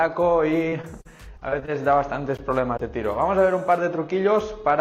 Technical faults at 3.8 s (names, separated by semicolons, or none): none